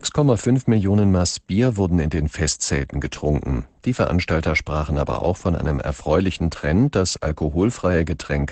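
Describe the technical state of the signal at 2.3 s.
At 2.3 s the speech carries Opus voice compression, as throughout the clip. The SILK coder narrows the band, so a spectrogram shows nothing above 8.7 kHz. Coarse excitation coding makes the voice plainly hoarse and slightly robotic, consistent with about 12 kbps.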